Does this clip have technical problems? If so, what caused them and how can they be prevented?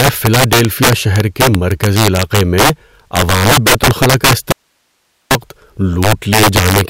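Yes. Integer overflow runs through the whole speech clip. The loudest peaks are driven roughly 8 dB past full scale. A few percent of samples exceed the limit. Instead of being clamped, they wrap to the opposite sign and jump across the entire range. The result is harsh, violent cracks on loud syllables, far sharper than ordinary clipping. To prevent it, use saturating arithmetic or a limiter before conversion, and leave headroom in gain stages.

An audio dropout to a faint residue starts at 4.52 s, just after "عوامی بیت الخلاء کا". It lasts about 0.79 s, until 5.31 s. The speech cuts off abruptly and returns just as abruptly. Only hiss remains in the gap, around 50 dB below the speech level. The path downstream stayed live while the signal itself was lost. The cause is likely a momentary break in the source feed, such as a loose connection or a stalled input stream. To prevent it, secure cabling and monitor input buffers so a stalled stream is caught and recovered quickly.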